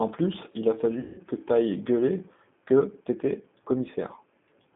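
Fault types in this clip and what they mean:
G.729 codec: A low-rate speech codec rebuilds the sound from a vocal tract model, a pitch predictor and a few pulses per frame. The line runs only from 150 Hz to 3.6 kHz. The rough, synthetic edge is plainly audible, which fits 8 kbit/s.
VoIP packet loss concealed by the speech codec: Just after "plus il a", about 180 ms goes missing, from 1.00 to 1.21 s. The gap points to six lost packets. The decoder stretches its last sound into a fading tone or noise until "que t’ailles gueuler que".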